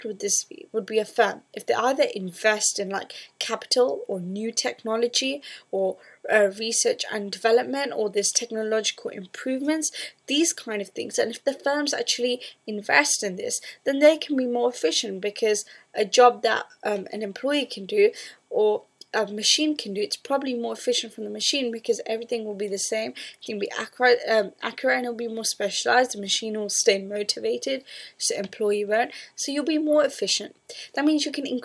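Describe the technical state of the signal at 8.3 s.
At 8.3 s the signal is intact, with no audible fault at that moment.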